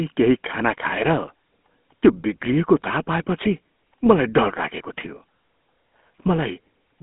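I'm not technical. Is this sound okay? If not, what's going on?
No. Throughout the clip, the speech has passed through the GSM full-rate codec, the compression used by early mobile phones. It rebuilds the voice from a simplified model driven by regular pulses, which gives everything a buzzy, gravelly roughness. The sound is also squeezed into a narrow phone band, roughly 200 Hz to 3.4 kHz, with nothing above 3.8 kHz. A plain phone line would sound just as thin but smooth. The grit here is what marks it as this codec.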